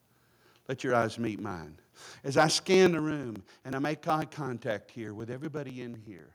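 Right from 0.17 s until 6.19 s there's a steady tick every 123 ms, some fifty in all. These are periodic USB or driver dropouts: something stalls the audio path on a fixed cycle and about 2 ms of speech gets skipped outright each time, so you hear little clicks riding along under the signal.

Between 2.38 and 2.44 s the loudest syllable turns harsh and crackly. That's most likely microphone overload, with the input driven roughly 3 dB past the converter's ceiling, so a few percent of the samples have their tops flattened.

Then at 2.94 s the whole level, speech and background together, drops by about 5 dB in a single step. That's the microphone volume stepped down, likely the call software pulling the input gain back after that clipped peak.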